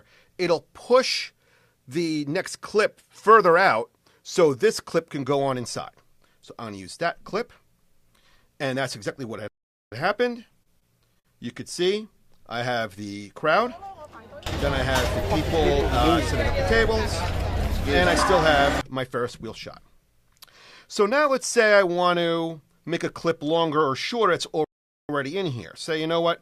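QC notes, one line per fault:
9.48–9.92 s, playback stall: the audio cuts to silence mid-flow for about 0.44 s, then resumes. The likely cause is the player running out of buffered data, or its output thread being blocked, so nothing reached the output until it recovered.
10.49–11.27 s, repeated stalls (stutter): five short gaps, the longest 52 ms, bridged by stretching the preceding sound, 124 ms in total and 16% of the span. Late packets kept draining the jitter buffer, so the audio drags and stutters while losing nothing.
12.15–13.18 s, jitter buffer slow-down: with the buffer running low, the receiver repeated tiny stretches of waveform many times over, adding 90 ms. Playback runs at 92% speed with unchanged pitch, so sounds feel drawn out.
18.53–19.99 s, jitter buffer speed-up: an oversized backlog in the buffer was trimmed by cutting many short waveform fragments, about 50 ms in all. 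The audio runs at 103% speed with pitch intact.
24.64–25.09 s, playback stall: a second dropout of about 0.44 s, where the output falls silent mid-flow before picking up again, pointing to the same kind of data starvation or blocked playback thread as the earlier stall.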